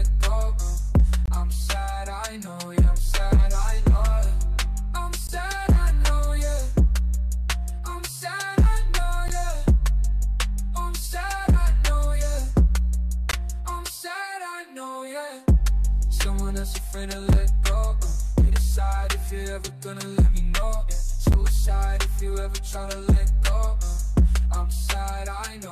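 Short, hard-edged dropouts of silence cut into the audio at 1.26, 5.27, 9.28, 13.31, 17.33 and 21.33 s, lasting about 4 to 23 ms. They recur every 4 s, which points to a gap between stream segments: mismatched segment timestamps leave holes that the player fills with silence.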